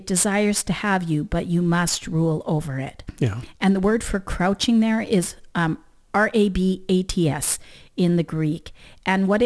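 Throughout the speech, aliasing folds content above 11 kHz back down as gritty, metallic sibilance fairly well below the speech level, with energy running right up to the band edge rather than rolling off.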